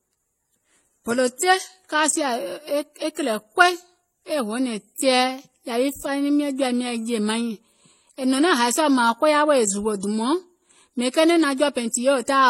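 Speech, and it's carrying stacked codec damage from start to finish. Nothing gets through above 16.2 kHz, and the artefacts of different codecs are heard together in a way that doesn't come from a single encoder. That combination is likely transcoding between lossy codecs, and the character fits a low-rate MP3 pass around 40 kbit/s re-encoded as HE-AAC around 32 kbit/s. The second encoder spent its bits on the first one's artefacts and added its own.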